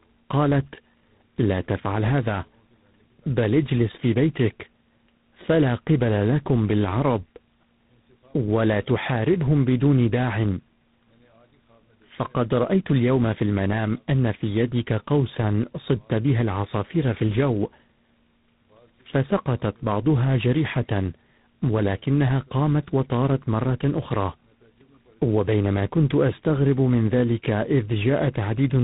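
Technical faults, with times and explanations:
Throughout, tandem speech coding: rough, muffled, warbly speech, nothing above 3.8 kHz, consistent with two low-rate speech codecs in series, the second re-coding the first's damage.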